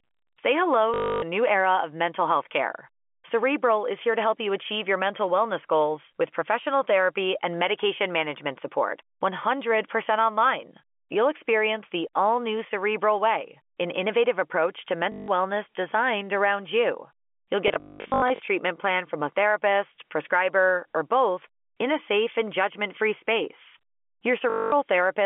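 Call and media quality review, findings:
Packet loss with last packet repeated: receiver lost packets and replayed the last one until new packets arrived, at 0.94–1.22 s (280 ms), 15.12–15.28 s (160 ms), 17.68–18.48 s (480 ms scattered across 800 ms, longest run 200 ms), and 24.5–24.72 s (220 ms). Robotic stutter buzzing near 50 Hz, which fits 20 ms packets. All of this sits over the G.711 A-law path's narrow 250 Hz to 3.4 kHz telephone band.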